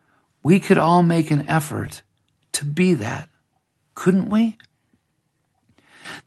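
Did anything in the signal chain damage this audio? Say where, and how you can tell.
Yes. At the network and jitter-buffer stage there is clock drift between sender and receiver, present for the whole clip. The sender's clock runs roughly 1% slow relative to the receiver, so the buffer keeps draining faster than it refills. You hear this as a faint unsteadiness in pacing that never settles, rather than as any single dropout. That points to a rate mismatch between two clocks, not to packet loss.

The repeated timing corrections are the receiver's response to that drift, running from 0.04 s to 5.05 s. To keep the buffer from running empty, it repeatedly stretches short pieces of the speech, playing the stretch at 99% speed and adding around 50 ms overall. The edits all go the same way and fall at uneven spacing, so they come across as slight hiccups and a subtly dragging tempo. The band-limited Opus-style coding, topping out near 12 kHz, sits alongside this.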